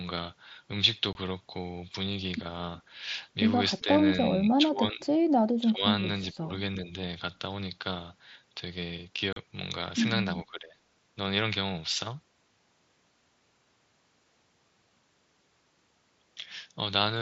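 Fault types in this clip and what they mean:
Unconcealed Bluetooth headset packet loss: Audio between headset and phone went missing, and nothing covered the gaps. Hard-edged holes open at 1.13 s, lasting 22.5 ms, and at 9.33 s, lasting 37.5 ms. Each sounds like a sudden dropout.
Echo leak: A faint, delayed copy of the sound appears briefly around 3.8 s. It trails by 370 ms and sits very low, about 35 dB under the main level. An echo canceller likely let some loudspeaker pickup slip through.
Speech suppressed in double talk: Level dips while the other side is active, near 3.8 s, 4.45 to 5.05 s, 5.6 to 5.83 s, 6.34 to 6.51 s, 6.83 to 6.91 s and 10.45 to 10.79 s. Drops range from slight to roughly 20 dB, likely from echo-canceller ducking.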